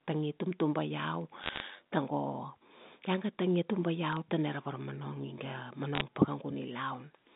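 Right after "tangi tumtuba", from 1.12 to 1.98 s, there's overlap-add ripple: badly overlapped frames make the level wobble by about 6 dB around 100 times a second, so it sounds like a metallic buzz. Sharp ticks from bit errors on a digital phone line land at 1.44–1.60 s, 4.13–4.17 s just before "tana ra", and 5.95–6.01 s. Flipped bits on the G.711 line corrupt single samples, so each burst comes through as crackle.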